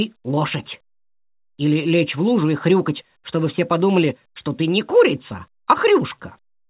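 Nothing stood out on listening; the audio comes through the call path as narrowband telephone-quality sound with nothing above 4 kHz.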